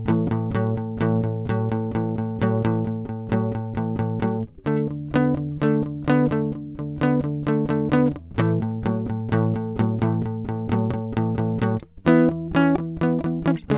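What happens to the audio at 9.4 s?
Nothing goes wrong at 9.4 s: the music plays through intact, with the same band limit near 4 kHz heard throughout, which fits a narrowband G.711 call codec.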